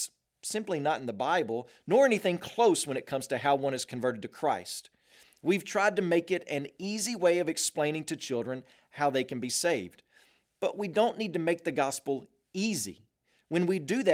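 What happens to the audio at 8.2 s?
Nothing goes wrong at 8.2 s; the speech carries on intact through that moment with no dropout, click or other fault.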